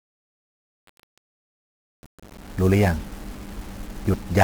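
Speech with 1-bit DFPWM compression throughout. It sounds fuzzy and crackly, with treble dulled or buried in hiss, which fits a 48 kbps DFPWM stream. The opening fade-in, reaching full level at 2.66 s, carries truncation distortion from 0 to 2.66 s. It is grittiest up to 1.68 s, because the fade keeps too few bits, around 12, without dither.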